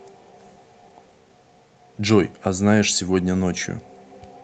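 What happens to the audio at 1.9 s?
At 1.9 s the audio sits inside a stretch of repeated timing corrections that runs from about 0.13 s to 4.36 s. The receiver is trimming short pieces out of the stream to keep pace with incoming audio that arrives at roughly 104% of its own rate. Each cut is small and they fall at uneven intervals, so around 1.9 s any effect is at most a slight hiccup or slightly hurried, unsteady tempo rather than any obvious gap.

The underlying fault is clock drift between sender and receiver, present across the whole clip. The sender's clock runs about 4 percent fast, so its samples pile up in the receiver's jitter buffer faster than they are played out. To stop the buffer overfilling, the receiver keeps discarding fragments, always in the same direction. That steady surplus is what drives the corrections heard at 1.9 s and elsewhere as recurring small timing glitches.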